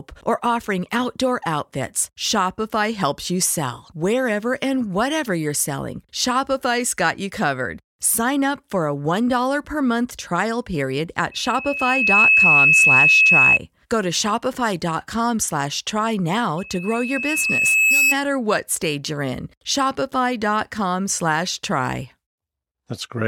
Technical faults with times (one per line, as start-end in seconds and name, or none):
11.31-13.59 loudspeaker feedback squeal
16.58-18.15 loudspeaker feedback squeal